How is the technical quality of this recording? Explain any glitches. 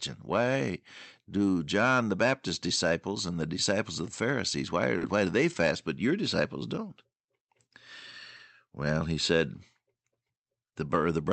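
The recording has several timing faults typical of a call link, all heard against the codec's band limit near 8 kHz.

Clock drift between sender and receiver runs through the whole clip. The sender's clock is slower by roughly 2%, so the receiver keeps compensating. Unlike random network jitter, the corrections all go one way.

Repeated timing corrections occur from 1.22 to 3.75 s, ending before "of the", and from 6.48 to 10.99 s, after "they fast but your". Small pieces are repeated, slowing playback to about 98% and 99% and adding roughly 70 ms each time. This is heard as an unsteady tempo rather than distinct breaks.

A short stall from a late packet happens at 4.98 s, just before "why do they fast", and again at 8.36 s. The jitter buffer ran empty, and 30 ms of the last sound was held with a slight buzz. Unlike a dropout, nothing is lost.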